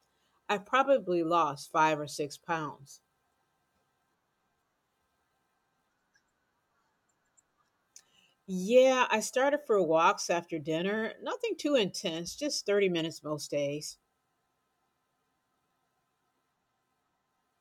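No technical faults are audible.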